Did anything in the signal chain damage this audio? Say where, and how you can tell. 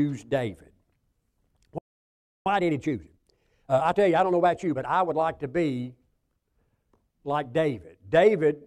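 Yes, at the playback stage. At 1.78 s the speech stops dead mid-flow and stays silent until 2.46 s, a gap of about 0.68 s, then resumes where it left off. That's a playback stall, likely the player's buffer running dry or its thread getting blocked.

Straight after that, from 2.46 s to 5.16 s, starting on "like to be", the speech runs hurried at about 1.25 times normal speed but keeps its natural pitch. That's time-compressed catch-up: the player snips out small slices and cross-fades across them to eat through its backlog.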